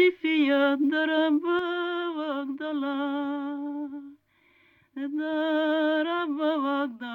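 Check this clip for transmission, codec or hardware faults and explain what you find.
One fault is present. One channel drops out from 1.59 s to the end: the likely cause is loss of a stereo channel, so the mono sum abruptly falls by about 6 dB.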